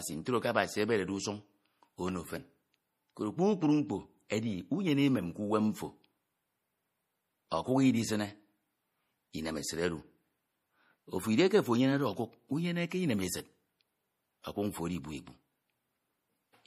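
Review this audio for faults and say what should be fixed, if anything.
A low-bitrate MP3 encode is the likely cause of the damage running through the whole recording. With too few bits available, the encoder discards everything above 14.9 kHz and zeroes weaker frequency lines, which then flicker in and out from frame to frame. The result is a plainly audible watery, swirling texture on the speech and a dulled top end, consistent with a bitrate around 40 kbps. Re-encode from the original source at a substantially higher bitrate, or keep it uncompressed.

Pre-echo appears at 4.28 s. A sharp attack lands late within a transform block, and the encoder spreads that block's quantisation noise evenly across its whole length, including the quiet moment before the onset. This produces a brief hiss of about 19 ms just ahead of the attack, which then sounds softened and smeared rather than crisp. 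A higher bitrate, or an encoder that switches to short blocks on transients, would prevent this.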